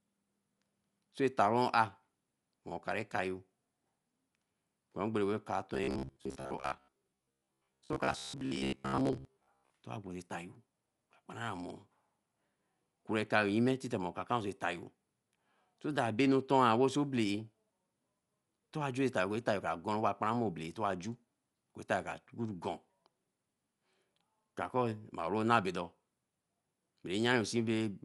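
Dolby Digital compression, throughout the whole clip, is the likely cause of the dull, band-limited speech, with nothing above 11.4 kHz. The damage is plainly audible, with rough, fluttering noise where starved frequency lines were filled with dither, which fits a low bitrate around 64 kbps.

Robotic sound from repeated short buffers runs from 5.75 to 9.70 s. The speech becomes a rigid metallic buzz at 66.8 Hz, likely from a roughly 15 ms block of audio being replayed for most of that stretch while new audio was skipped.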